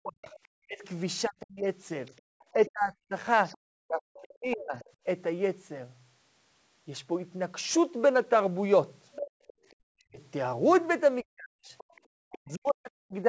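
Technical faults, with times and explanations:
Throughout: sample clock jitter. A fine hiss and roughness ride on the speech for the whole clip. It grows on loud and bright sounds and disappears in the pauses. The converter's clock wavers by around 7 microseconds, so each sample lands slightly early or late. Where the waveform moves fast, that timing slip becomes an amplitude error. Here the error sits about 30 dB below the signal. That is why it tracks the speech rather than forming a steady noise floor.
0.0 to 4.75 s and 9.93 to 13.24 s: speech suppressed in double talk. In both stretches the talker's voice sinks, thins and breaks into pieces. The deepest dips reach about 40 dB. Roughly two seconds are affected in the first stretch and one and a half in the second. The likely cause is both sides talking at once. The echo canceller could not separate the near voice from the loudspeaker echo, so it turned both down.
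0.26 to 0.46 s, 2.06 to 4.91 s, 9.13 to 9.74 s and 11.78 to 12.01 s: other side's voice leaking through. A second voice appears under the talker in these spans. Most of it sits about 25 dB below the speech. The span from 9.13 s is much stronger, only about 10 dB down. The likely cause is the far side playing on the talker's loudspeaker. The echo canceller left part of it in the microphone.
2.21 to 2.25 s and 9.31 to 9.65 s: background gated by the echo canceller. The room sound drops out, by about 40 dB in the first brief gap and about 39 dB in the longer second one. It then returns. The canceller clamped the microphone hard while the loudspeaker played. The gaps line up with the leaking far voice. The band stops near 8 kHz from normal call processing.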